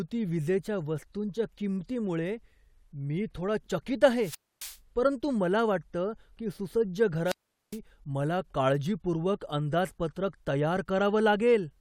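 Wireless microphone squelch dropouts occur at 4.18 to 4.79 s, after "मी थोडा चकीत", and at 7.24 to 7.79 s, after "मला वाटतं की सुसज्ज". The radio signal fades, hiss rises, and the receiver's squelch mutes the speech for about 270 ms and 410 ms.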